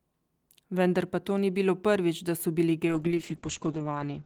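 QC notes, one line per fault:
2.89–4.26 s: call bitrate drop. Encoding falls from 32 to 8 kbps; coarser quantisation and bandwidth cut from 20 kHz to 8 kHz make speech rough and muffled.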